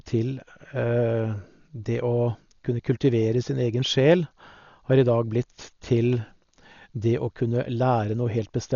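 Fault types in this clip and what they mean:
Dolby Digital compression: the whole speech clip sounds dull, with nothing above 7 kHz and a rough, fluttering noise around the voice. It's likely heavy AC-3 coding at a starved bitrate, something like 40 kbps, with unfunded frequency lines filled with dither noise.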